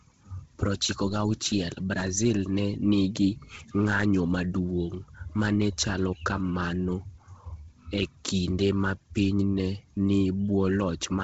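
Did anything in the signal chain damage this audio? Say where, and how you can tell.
Yes, at the codec stage: throughout, the speech stops near 7.8 kHz and sounds grainy and breathy, likely Bluetooth LC3 compression noise-filling a heavily stripped upper spectrum.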